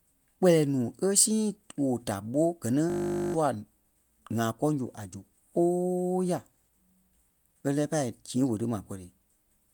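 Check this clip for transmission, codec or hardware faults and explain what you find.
One fault, a system hang loop. From 2.9 to 3.34 s, just after "da ɓó gɛ ni", the speech becomes a steady 50 Hz buzz: a 20 ms slice of audio replays over and over while the system stalls, and roughly 0.4 s of speech is lost.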